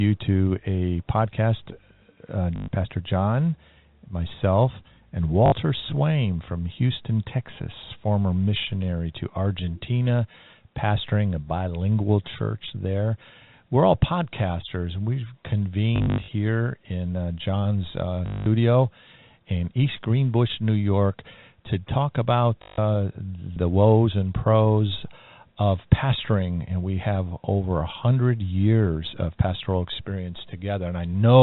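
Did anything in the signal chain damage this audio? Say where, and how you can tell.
Yes, network packet loss with the last packet repeated: robotic stutters at 2.56–2.68, 5.46–5.52 after "myself and", 15.96–16.28 before "in uh", 18.26–18.46, and 22.62–22.78 between "to talk" and "the woes and pros". Repeated audio buzzing near 50 Hz, which fits 20 ms packets, rather than silent gaps, marks concealment, not dropout.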